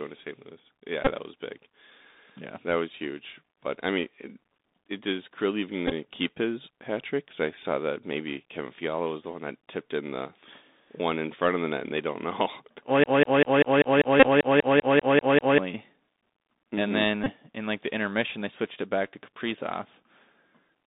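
Throughout, the speech carries the sound of the Bluetooth CVSD headset codec. It is confined to a narrow line band of about 200 Hz to 3.7 kHz, with nothing audible above that. The codec works as a 64 kbps one-bit delta stream that can only step up or down. Loud, bright sounds outrun its adapting step size and distort, sibilants come out scratchy, and a fine granular hiss sits under the voice.

The first Bluetooth headset packet repeated event falls at 1.05 to 1.11 s, just before "that was big". When voice packets between headset and phone drop, the decoder replays the last packet's bits, so about 18.8 ms of audio is lost. That fits five 3.75 ms packets and is heard as a short buzzy stutter. At 5.87 to 5.92 s, before "keep his hat trick", 30 ms is lost. The losses are scattered across 45 ms with runs of about 10 ms, giving a broken, rough flutter rather than one buzz.

From 13.04 to 15.59 s a broken-record loop takes over. 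A 196 ms fragment plays back to back 13 times, and the speech that belonged in those two and a half seconds never arrives. The likely cause is a stalled stream or player resending the last fragment it held. Inside that loop, at 14.20 to 14.28 s, another packet repeat costs 30 ms, about eight packets' worth, as a brief buzz near 267 Hz. The last repeat, at 17.24 to 17.31 s just before "in like the intermission", loses 22.5 ms as a similar short buzz.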